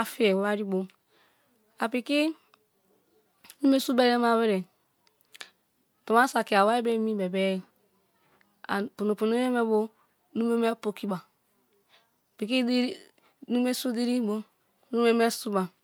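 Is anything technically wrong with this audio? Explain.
No, no technical faults heard.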